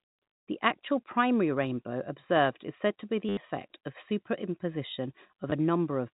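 At 3.29 to 3.37 s, packet loss with last packet repeated replaces about 80 ms of the speech with the last received packet looped, giving a brief robotic buzz. A shorter 20 ms repeat follows at 5.50 to 5.52 s, heard through the band-limited G.711 telephone path.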